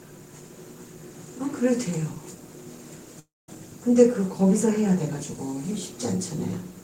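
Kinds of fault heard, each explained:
Long network dropout: from 3.19 to 3.49 s the sound smears into a fading buzz, then about 0.21 s of near-silence, and resumes with roughly 0.29 s missing. The likely cause is packets not arriving, with the receiver stretching the last audio to cover the gap.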